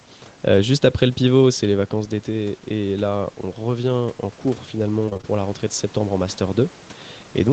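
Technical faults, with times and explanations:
1.7 to 6.8 s, automatic gain rising: Shortly after the talker moves away from the microphone at about 1.5 s, the level of the sound drops by about 9 dB. The voice and the room noise then swell together slowly over several seconds. The call's automatic gain control has judged the input too quiet and is raising its gain by about 6 dB. It does this in small steps, so the background lifts in step with the voice.
5.05 to 5.25 s, repeated packet loss (robotic sound): For about 0.2 s the voice turns choppy, with small pieces dropping out. The sound points to around five short holes in the stream, the longest about 21 ms and together about 100 ms. Each hole is patched by stretching out the last bit of sound, and the next hole arrives almost at once. Nearly half of this stretch is filled-in sound, which gives it the robotic edge.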